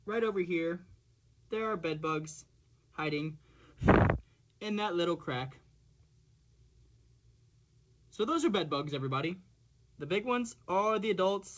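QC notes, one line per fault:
No faults found in this clip. The audio went through a WebRTC call path and has no content above 8 kHz, which fits a wideband codec such as G.722.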